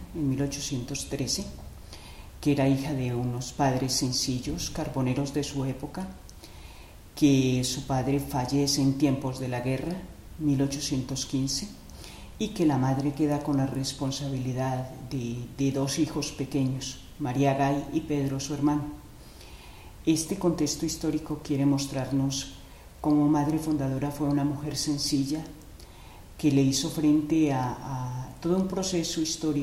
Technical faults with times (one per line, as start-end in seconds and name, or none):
none